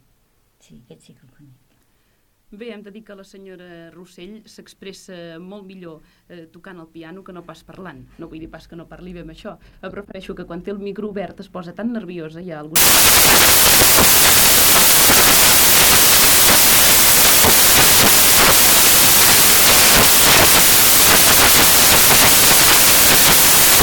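At 12.76 s the audio collapses into loud hiss that runs to the end, the signature of samples built from the wrong bytes: a misaligned or swapped byte order turns rapidly changing low bits into each value's dominant part. A spectrogram shows flat broadband noise filling every frequency; the waveform becomes a dense block.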